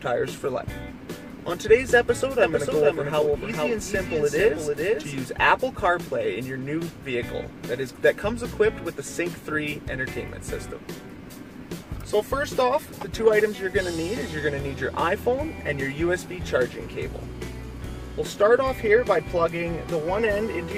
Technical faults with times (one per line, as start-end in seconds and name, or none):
2.43-5.21 doubled audio track